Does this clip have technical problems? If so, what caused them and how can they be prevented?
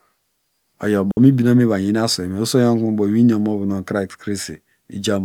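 Yes: a digital wireless dropout from 1.11 to 1.17 s, where the receiver lost too much data and muted the speech for 60 ms. The waveform shows a flat gap and the spectrogram a clean vertical blank band, with no noise burst. Keeping a clear line of sight and avoiding crowded frequencies prevents it.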